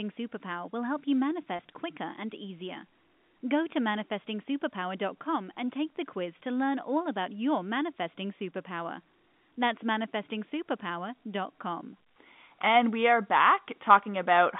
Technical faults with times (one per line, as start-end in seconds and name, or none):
1.56-1.59 packet loss with pitch repetition